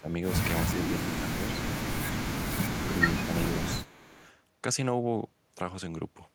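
The speech dips in short pieces at 0.0–0.09 s, 0.72–0.92 s, 1.14–1.34 s, 3.26–3.48 s and 3.66–3.9 s. The deepest drops reach roughly 15 dB. This is likely speech suppressed in double talk. The echo canceller turned down the talker along with the far side.

From 3.85 to 4.28 s a faint delayed copy of the speech appears. It trails by 370 ms and sits about 25 dB below the speech. This is an echo leak. The far-end echo canceller likely let loudspeaker sound back through.

A last mild dip of about 5 dB follows at 4.07–4.19 s.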